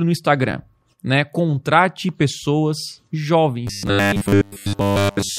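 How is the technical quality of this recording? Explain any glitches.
The recording breaks down in its final stretch. From 3.67 s to the end at 5.38 s there is robotic sound from repeated short buffers. The likely cause is fresh audio reaching the playback software too seldom, so it keeps replaying the last fragment, about 10 ms long, while the real signal is dropped, here throughout. Looping a 10 ms slice imposes a fixed 100 Hz buzz, so the speech becomes a flat, metallic buzz that only loosely tracks the original rhythm.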